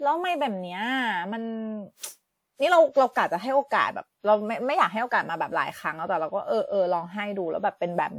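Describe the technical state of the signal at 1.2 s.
Generation loss is present at 1.2 s, as it is across the whole clip: the speech sounds swirly, hollow and smeared, with blurred attacks. This likely comes from around seven successive lossy encodes, consistent with WMA at 128 kbit/s, each re-quantising on a shifted frame grid.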